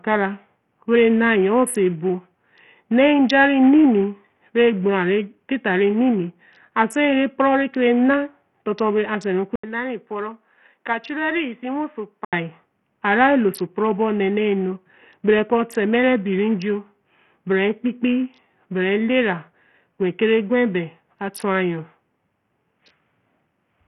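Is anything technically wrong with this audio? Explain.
Yes, two faults are audible.

Throughout the speech there is a gritty, coarse texture and no content above 13.9 kHz, with the upper treble flickering. This is most likely Bluetooth SBC compression at a very low bitrate, around 48 kbps. SBC splits the signal into a few wide sub-bands and hands out bits without a hearing model, so the top bands starve and the rest are crudely quantised. That produces grit and aliasing rather than the swirly, watery artefacts of perceptual codecs.

From 9.56 to 12.33 s the input switched to a poorer device, likely a different microphone or a headset call profile. An 80 ms silence marks the changeover, then the speech turns boxy and dull, with nothing above 4.2 kHz, a slightly lower level and a faint new background noise. Near 12.33 s it returns to the original sound. A filter alone would narrow the band, but it would not bring in the gap, the level step and a different noise floor together.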